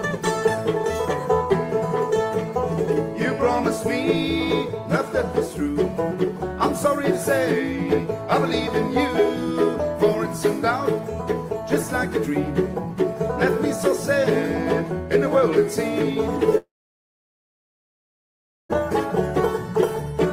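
A long network dropout runs from 16.57 to 18.71 s. The audio trails off into a short fading buzz, then about 2 s of silence, and resumes with that stretch missing, likely because packets stopped arriving and the receiver filled the gap with concealment.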